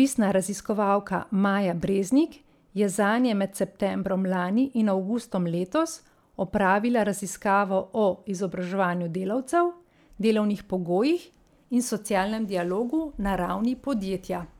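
Speech recording; no technical faults detected.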